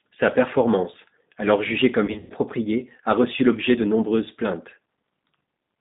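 Speech passing through the G.729 codec sits in a 150 Hz to 3.7 kHz band and carries a rough, synthetic texture that plain band-limiting alone wouldn't produce. From 2.06 to 2.33 s, just after "performance alors jugée", VoIP packet loss concealed by the speech codec fills the gap with a buzzy tone or coloured noise that fades, rather than silence. About 180 ms of audio is missing across 240 ms, with a longest run of 120 ms.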